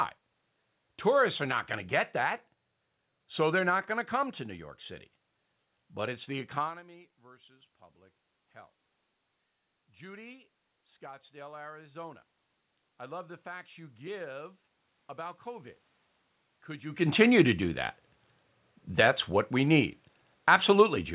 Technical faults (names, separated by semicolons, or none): automatic gain rising